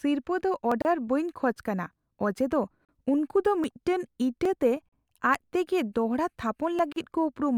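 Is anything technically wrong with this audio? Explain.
Yes, there are two kinds of fault in this speech clip.

First, there are five sharp single clicks, at 0.72, 3.64, 4.45 (right after "ᱫᱚ ᱢᱤᱫᱴᱟᱝ"), 5.35 and 6.79 s. These are most likely dropped samples: a fraction of a millisecond of the stream goes missing, so the waveform jumps straight to a later value. That's far too little to lose any of the speech. You just get a tick, which shows as a thin vertical line in the spectrum.

Second, there are short holes at 0.82–0.85 s (about 30 ms), 2.85–2.89 s just after "ᱠᱟᱱᱟ ᱚᱡᱮᱫᱚ", 4.89–4.93 s and 6.93–6.96 s (about 38 ms each), spaced every 2 s. That regular spacing is the giveaway for a gap at a join of encoded pieces. Two-second chunks were encoded separately and stuck together untrimmed, so each chunk's encoder start-up silence and end-frame padding survive. The speech drops out, with smeared edges, then resumes right where it left off.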